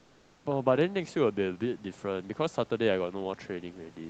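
Speech clip. From 0.0 to 0.45 s, comfort noise in place of the background: a steady, featureless hiss about 3 dB quieter, likely from discontinuous transmission during the silence.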